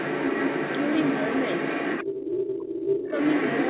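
From 0 to 3.7 s, a second talker runs under the speech at roughly the same level: the other side's voice leaking through. The likely cause is a loudspeaker feeding the far end back into the microphone, with the echo canceller failing to strip it out.

Between 2.15 and 3.11 s, the main speech sinks sharply, around 30 dB at its lowest, for roughly a second. This is speech suppressed in double talk: with both sides active, the echo canceller likely attenuated the near talker along with the echo. The audio stays band-limited to 4 kHz throughout, which fits a narrowband telephone codec.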